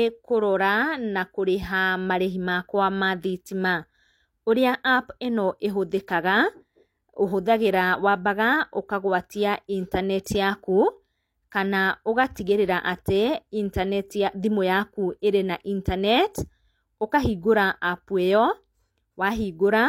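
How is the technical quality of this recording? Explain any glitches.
The recording has one glitch, pre-echo at 12.35 s: the transform codec spread quantisation noise across a whole block, so a brief hiss leaks 13 ms ahead of a sharp speech attack and smears its onset.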